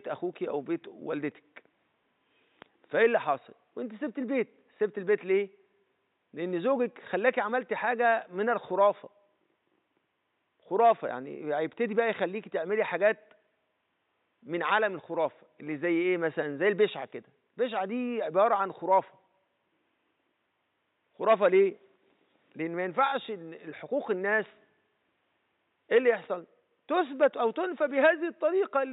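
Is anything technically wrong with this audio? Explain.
No, nothing is technically wrong with this audio.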